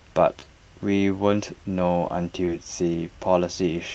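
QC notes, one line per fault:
0.39–0.45 s, short concealed packet loss: about 20 ms of speech arrived too late to decode, and the receiver bridged it by extending the preceding sound for 20 ms before crossfading back, leaving a brief smear rather than a silent gap or hard click. The repair also lengthens the passage by roughly 15 ms, a slight stretch that a plain dropout would not cause.
2.45–2.49 s, short concealed packet loss: another 20 ms hole, filled with 22 ms of continued sound that blends back in, heard as a small wobble with no break in level.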